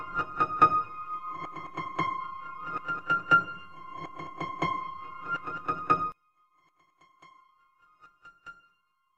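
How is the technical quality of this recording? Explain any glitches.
The recording has one clear fault. From 6.12 s to the end, the sound collapses by about 27 dB, leaving a faint, distant trace of what was there before, background included. This is likely one channel inverted: one side of a stereo source had its polarity reversed, so when the two sides were summed to mono, everything they shared cancelled and only the small difference between them survived.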